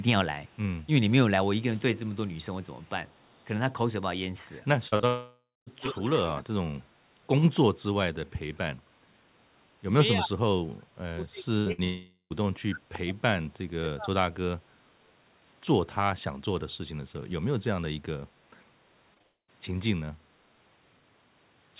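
The clip is a speech recording from a call with several network and echo-control faults. At the far end, an echo canceller likely left part of the loudspeaker signal in its microphone feed, producing an echo leak. A faint copy of the voice, about 40 dB down and trailing by 285 ms, appears at 0.45–0.57 s, 1.96–3.44 s and 6.79–6.83 s. At 5.80–6.42 s it rises to about 10 dB below the voice. Just before that, from 4.88 to 5.05 s, repeated packet loss opened three gaps, the longest 39 ms, and about half of that span was patched. The result is a choppy, robotic stretch. A long network dropout likely followed each of three points: 5.07–5.68 s, 11.84–12.32 s and 19.22–19.5 s. Each time, the receiver extended the last sound as a fading buzz or hiss, then fell silent, and the audio resumed with that portion gone. Between 10.15 and 14.15 s, and again at 14.60–14.77 s, speech was suppressed in double talk. 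Overlapping speech likely led the echo canceller to duck this talker by up to about 30 dB across roughly 3 s, and by about 15 dB in the later dip, so the voice sinks. Inside that span, bursts of packet loss at 11.58–11.68 s and 11.72–11.80 s removed about 80 and 60 ms, which were covered by a held buzz or fading hiss. Short concealed packet losses at 19.14–19.18 s and 19.18–19.22 s each dropped about 20 ms, heard as brief smears right before the final dropout. Throughout, the call path cuts everything above 4 kHz, which fits narrowband G.711 telephony.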